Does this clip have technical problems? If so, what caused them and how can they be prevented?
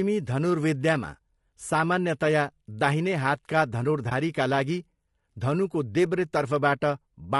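Yes. Throughout, the speech sounds rough and grainy, with noise between harmonics and a thin top band, likely from low-delay AAC compression (AAC-ELD) at a low bitrate, around 32 kbps. Raising the bitrate or using a longer-frame codec would prevent this.

Just after "सामान्यतया दाहिने हातका", from about 4.09 to 4.12 s, there is a brief dip. This is AAC frame loss with muting: a single lost frame was zeroed, and the overlapping windows faded the sound out and back in. Packet-loss concealment or forward error correction on the network path would prevent this.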